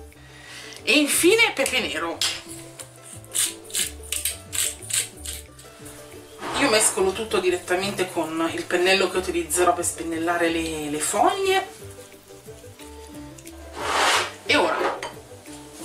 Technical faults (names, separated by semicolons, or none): none